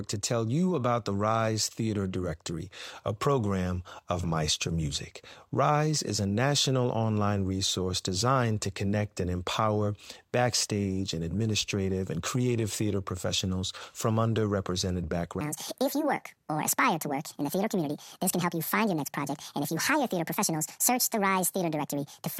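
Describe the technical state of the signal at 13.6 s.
At 13.6 s the speech signal is intact, with no audible dropout, distortion, noise or other technical fault at that moment.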